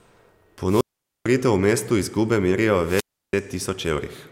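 Wireless microphone squelch dropouts occur at 0.67 to 1.26 s and 2.84 to 3.34 s, after "mestu izgube merijo". The fading radio signal brings up hiss before the receiver's squelch mutes the speech for about 0.45 s and 0.33 s.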